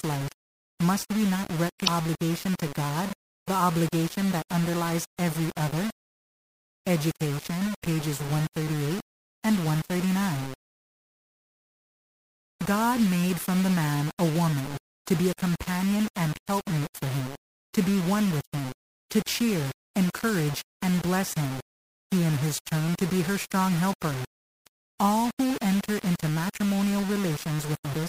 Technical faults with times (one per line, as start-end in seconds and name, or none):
0.00-28.08 low bit depth without dither
1.84-1.88 damaged data in a compressed stream
27.90-27.95 damaged data in a compressed stream